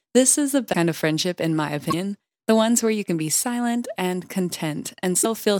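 At 0.72 s, 1.90 s and 5.21 s the speech jumps ahead with a short garbled glitch, lasting about 26 ms, 42 ms and 44 ms. That's a broken MP3 bit reservoir, likely. Frames got dropped, and the frame after each gap tried to borrow bits from earlier frames that weren't there, so it decoded someone else's bytes. The lengths match one to two MP3 frames of about 26 ms each, which fits.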